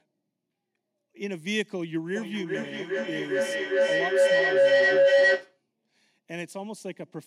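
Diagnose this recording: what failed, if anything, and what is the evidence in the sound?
The failure is acoustic feedback howl, at the call processing stage. From 2.15 s a tone builds under the speech and swells to about 13 dB above it. It sits around 500 Hz and pulses roughly every 400 ms. It stops at 5.63 s. Two devices on the same call share a room. Each pass from loudspeaker back into microphone adds level. The loop favours one band near 500 Hz, and its round trip sets the pulse rate.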